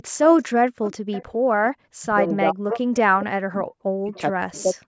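From 0.26 to 0.44 s and again from 0.84 to 1.24 s there is an echo leak: a faint delayed copy of the speech, trailing it by about 430 ms and sitting roughly 15 dB below it. The far end was likely on a loudspeaker whose echo canceller let part of the pickup return. On a spectrogram it shows as a weaker duplicate of the harmonic pattern, shifted right by that delay.

From 1.79 to 2.85 s and from 3.2 to 4.76 s comes speech suppressed in double talk. The level collapses in pieces, by as much as 40 dB at the deepest, over about 0.7 s and then about 1 s in total. The likely cause is an echo canceller that could not tell the local talker from the returning echo while both sides were active, so it attenuated everything. The waveform shows ragged notches in the envelope, and the spectrogram shows gaps and thinned-out high frequencies. Inside the second stretch, two brief echo scraps return at 4.14 to 4.21 s and 4.58 to 4.62 s, about 440 ms late and far quieter, around 25 to 30 dB down.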